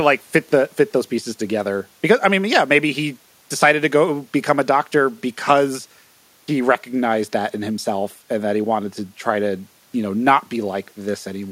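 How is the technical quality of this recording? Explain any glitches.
The recording's technical quality is sound: the speech signal stays continuous and stable throughout, with no audible glitches to explain.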